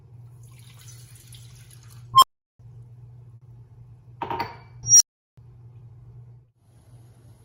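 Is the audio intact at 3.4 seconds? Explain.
No, a burst of packet loss at 3.35 to 3.43 s drops 60 ms of audio. The last sound is held and faded to fill the gap, showing as a smeared, decaying band before an abrupt resumption.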